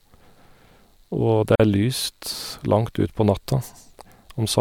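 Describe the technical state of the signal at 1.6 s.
At 1.6 s the speech is just resuming after a gap at a join of encoded pieces, a silence of about 42 ms running from 1.55 to 1.60 s. Two separately encoded segments were joined with their encoder start delay and end padding left in, so the sound drops out abruptly with smeared edges, then continues from where it stopped.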